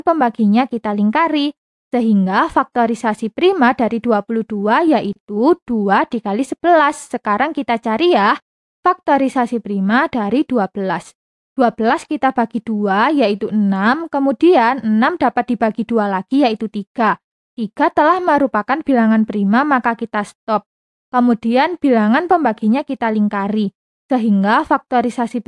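Nothing stood out as a technical problem on listening to this recording.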